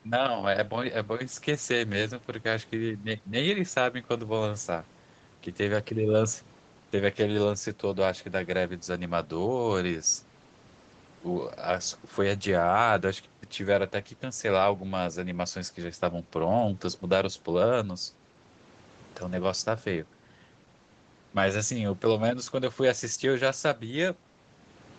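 Nothing goes wrong in this speech recording; it simply has the narrower sound of a call, with nothing above about 8 kHz after the microphone processing and the Opus call path.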